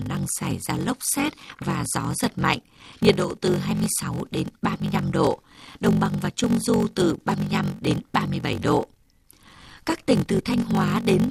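From start to finish the speech carries a steady buzz near 46.9 Hz and runs slow, at about 0.86 times normal speed, with pitch essentially unchanged. This is a block size mismatch (padded). One stage hands over blocks shorter than the next expects, and each shortfall is zero-filled, which fits 1024-sample reads. Those regular silent slivers create the buzz and stretch the timing. Simply playing the audio slow would drop the pitch, and dropouts would fall irregularly instead of locking to a fixed rate.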